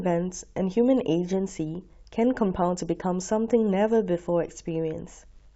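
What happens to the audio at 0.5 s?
Nothing goes wrong at 0.5 s; the speech there is intact, with no dropout, glitch or other fault.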